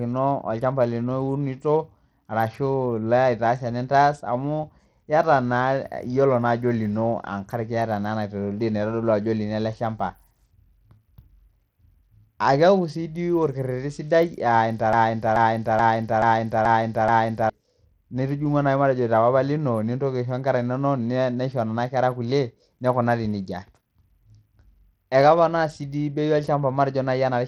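Bluetooth SBC compression runs through the whole of this speech recording, audible from start to finish as a thinned, flickering top end with a gritty haze on the sound. The sub-band coder appears to be starved of bits, so the upper bands drop in and out while the remaining bands are coarsely quantised, leaving aliasing and grain. The damage is plainly audible, and the treble loss points to a low bitrate, around 80 kbps. A broken-record loop takes over from 14.93 to 17.50 s. A 0.43 s fragment plays back exactly, end to end, six times in a row, and whatever should have been heard in those two and a half seconds never arrives. The likely cause is a stalled player or stream that kept resending the last chunk it held.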